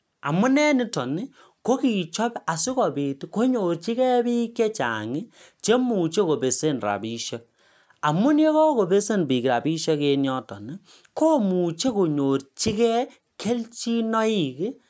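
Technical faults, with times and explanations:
No technical faults are present in the speech, which has passed through a call's microphone processing: its high-pass filter removes the lowest bass and nothing sits above 8 kHz, both normal for that path.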